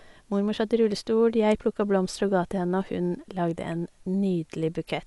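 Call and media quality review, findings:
Dolby Digital compression, throughout: speech dull, nothing above about 11.5 kHz, rough fluttering noise around tonal parts. Likely AC-3 encode at low bitrate, consistent with 64 kbps; band narrowed, many frequency lines left without mantissa bits, filled with dither noise on decode.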